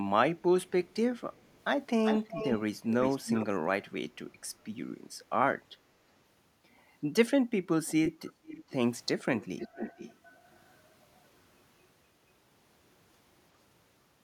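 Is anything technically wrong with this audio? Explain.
Yes. An echo leak occurs five times. A delayed copy of the speech lags by 229 ms at 0.89–0.96 s and 1.32–1.58 s, very faint. At 2.05–3.46 s it lags 365 ms at nearly full level. At 7.86–8.74 s and 9.37–10.4 s it lags 465 ms, somewhat quieter. The likely cause is a loudspeaker on one side whose echo canceller let part of the microphone pickup through and back down the call.

Background gated by the echo canceller occurs from 8.33 to 8.47 s, during the fourth echo. The room sound dips by up to about 8 dB for around 150 ms, then recovers. The canceller clamped the microphone down hard while the loudspeaker was playing and released it afterwards.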